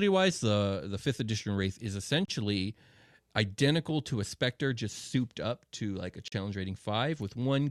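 Gaps between stream segments occur at 2.25 to 2.28 s and 6.28 to 6.32 s, silent holes of about 27 and 39 ms with abrupt edges. Adjacent segments' timestamps don't meet, which fits 1-second segments, so the player inserts silence. No speech is lost.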